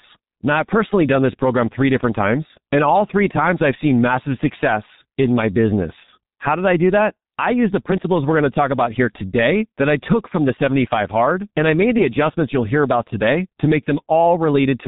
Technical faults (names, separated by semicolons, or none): G.723.1 codec; loud pop